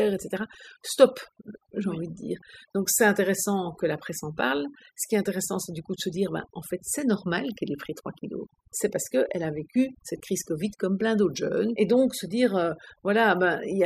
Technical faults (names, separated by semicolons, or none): overdone noise removal